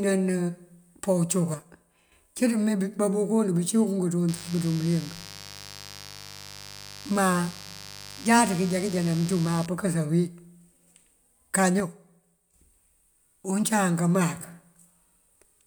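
At 1.54 s the speech suddenly drops by about 6 dB and stays down until 2.12 s, then snaps back. The same thing happens again from 11.80 to 12.54 s. That abrupt, flat step in level is what you'd expect if one channel drops out of a stereo feed that's being summed to mono. The likely culprit is that a channel went missing: whatever was common to both sides loses half its contribution, and anything living only in that channel vanishes outright.

In between, from 4.28 to 9.66 s, there's a steady, raspy mains buzz sitting roughly 20 dB under the speech. It's built on 50 Hz, but it's not a clean hum. Sharp switching spikes, the sort a dimmer, rectifier or unshielded run lets in twice per mains cycle, stack up harmonics well into the kilohertz range, which gives it that gritty edge.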